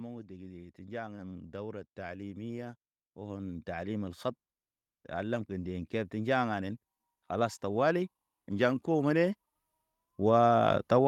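Automatic gain rising: the gain control judged the input too quiet and ramped up, by about 9 dB from 0.28 to 4.23 s and about 8 dB from 5.15 to 9.43 s, swelling speech and background together.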